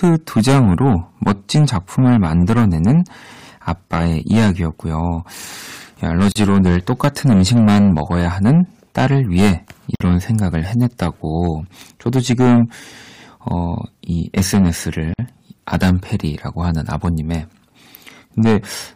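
Throughout the speech, a stage in the chain is driven about 12 dB past what it can pass, so roughly one sample in twenty-five gets its peak sliced flat. This is hard clipping, and it puts a harsh, buzzing fuzz on every loud syllable.

At 6.32 s, 9.95 s and 15.14 s, separately encoded pieces were joined without trimming their start delay and end padding. Each gap at a join of encoded pieces briefly breaks the speech, opening gaps of about 36, 50 and 51 ms, with edges smeared by the codec so the silent part is shorter, and the speech then carries on from where it stopped.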